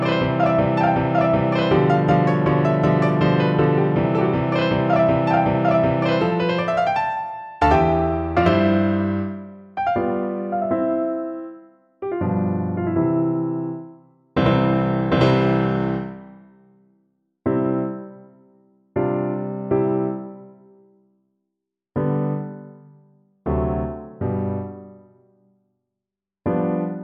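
Hard clipping at 1.75–2.14 s, 2.85–3.25 s, 3.60–3.64 s, 5.69 s, 7.63–7.75 s, 8.38–8.48 s and 14.46 s. Peaks overdriven by about 0 to 3 dB are cut flat, adding high harmonics that crackle on those peaks.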